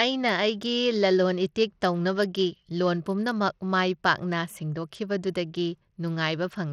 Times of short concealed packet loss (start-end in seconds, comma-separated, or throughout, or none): none